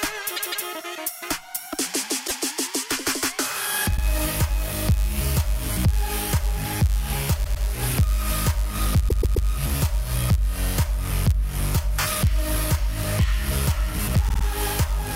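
One processing stage writes shorter blocks than the next one reads, and the shortfall is zero-filled. This is a block size mismatch (padded), running throughout. The repeating gaps give a buzz near 99.6 Hz, and the sound runs about 0.4% slow at essentially normal pitch.

Runs of compressed frames were delivered more than once, producing repeated frames at six points. From 0.35 to 0.67 s, a 157 ms chunk plays twice extra, and from 2.26 to 2.42 s a 157 ms chunk plays once extra. A 52 ms chunk repeats once at 3.96 s. A 105 ms chunk repeats twice from 7.43 to 7.64 s, and a 131 ms chunk three times from 9.08 to 9.47 s. A 52 ms chunk repeats three times from 14.28 to 14.43 s. Each is heard as a stutter.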